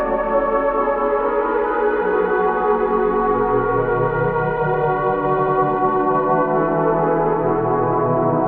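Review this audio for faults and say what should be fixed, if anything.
At 5.34 to 5.53 s the music stutters: a short slice plays again. These are repeated frames. The decoder received the same block of compressed data more than once and played it again, which points to frames of about 93 ms. The repeat adds about 186 ms to the clip's length. To prevent it, check the writing or transmission path for duplicated packets and drop them before decoding.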